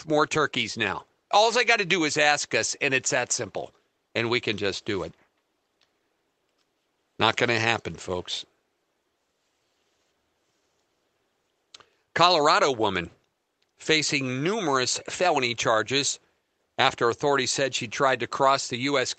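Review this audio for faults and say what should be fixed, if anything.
No faults; nothing needs fixing.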